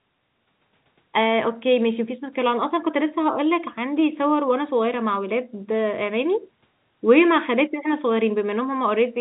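No faults: the speech carries the expected call-path character, with the band topping out at about 4 kHz and the coding noise consistent with a G.711 mu-law codec at 64 kbps.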